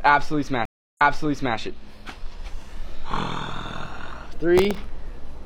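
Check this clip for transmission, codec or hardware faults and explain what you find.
Two faults turn up here, a stream reconnect near the start and a patch of processor overload crackle near the end.

The stream reconnect runs from about 0.65 to 1.57 s. The connection dropped, so the player went quiet for 312 ms, reconnected, and spun up a fresh decoder mid-stream. Because the server pushed a burst of buffered data on reconnect, playback picks up 604 ms earlier than where it broke off, so you hear a short gap and then a stretch of audio repeated.

From 4.58 to 4.84 s there's processor overload crackle. The CPU couldn't keep up, so a run of tiny audio buffers, something like fifteen, missed their deadlines back to back. Each miss replayed a scrap of old audio with hard edges. The buffers sound very short, which fits a buffer well under a millisecond. Strung together, those scraps give a gritty, tearing crackle sitting on top of the sound until the load eases.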